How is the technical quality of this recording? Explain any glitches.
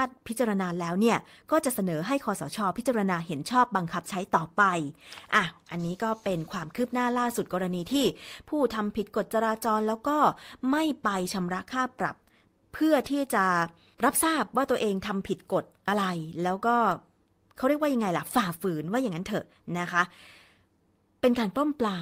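No technical faults are audible.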